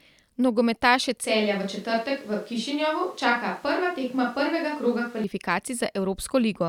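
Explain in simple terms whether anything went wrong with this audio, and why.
Something did go wrong. From about 1.25 to 5.24 seconds the speech suddenly turns roomy and hollow, a bit quieter, with less low end and more background noise, then snaps back just as abruptly. That sudden on-off change points to a switch to a distant microphone, most likely because the close mic dropped out. A simple volume dip wouldn't add room echo, and a gradual move away from the mic would shift smoothly rather than jump.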